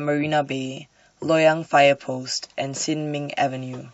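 No technical faults can be heard anywhere in the recording. The speech runs from beginning to end without any interruption or disturbance.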